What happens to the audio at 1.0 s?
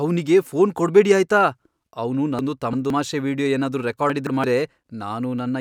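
Nothing goes wrong at 1.0 s; the speech runs through that moment intact, with no dropout, click or distortion.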